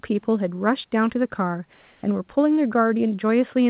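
From 1.73 to 2.03 s, comfort noise replaces the background. It sounds flat, featureless and about 2 dB quieter. Discontinuous transmission is the likely cause.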